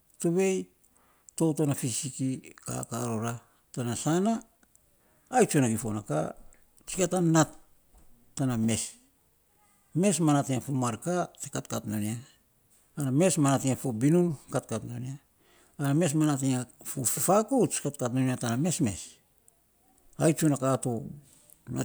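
The clip is a recording of speech, and nothing is technically wrong with it.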